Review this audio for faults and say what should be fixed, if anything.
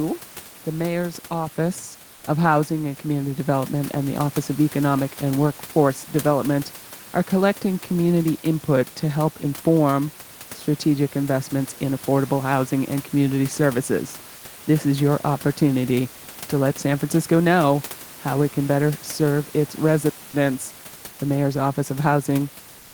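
From 22.81 s to 22.94 s, in the last 0.13 s of the speech, the real room background gives way to comfort noise in place of the background. The room noise, sitting about 23 dB below the speech, is replaced by a steady, featureless hiss at the same level, about 28 dB below the loud passages. This is likely Opus DTX, which stops transmitting once voice activity ends and leaves the receiver to synthesise a noise fill. Disabling DTX on the encoder, or delaying its onset, would keep the genuine background through the tail.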